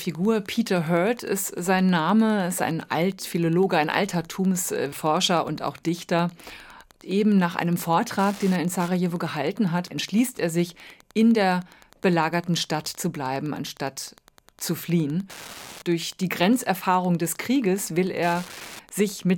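Throughout, the circuit rectifies a nearby Wi-Fi beacon sent every 102.4 ms. This Wi-Fi interference ticks about ten times a second, roughly 25 dB below the speech.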